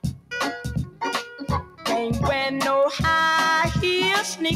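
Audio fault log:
Throughout, noise suppressor applied to music or sounds: a speech-tuned suppressor treats sustained sound as noise and pulls it down by around 5 dB. The waveform envelope pumps, and the spectrogram shows held bands fading between brighter onsets.
0.00–0.31 s and 1.63–1.85 s, sound cut by the noise suppressor: steady sound is mistaken for noise and drops about 12 dB, then about 11 dB. The waveform visibly shrinks, and the spectrogram dims over those spans.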